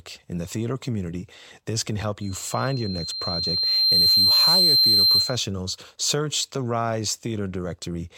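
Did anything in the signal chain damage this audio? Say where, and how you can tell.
Yes. The damage is acoustic, in the analogue stage between loudspeaker and microphone: loudspeaker feedback squeal from 2.21 s to 5.47 s, right after "community this can help" and ending before "search the". A single tone near 4.2 kHz appears and swells over roughly two seconds until it sits about 10 dB above the speech. The microphone was picking up its own loudspeaker, and at that frequency the loop gain passed unity, so the tone kept reinforcing itself until the amplifier limited it or the loop was broken.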